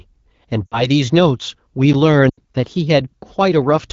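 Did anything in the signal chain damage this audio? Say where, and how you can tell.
Yes. These are lost AMR speech frames on the radio link. At 0.66 s and 2.30 s, the speech drops to near silence as the decoder repeats its last good parameters with falling gain.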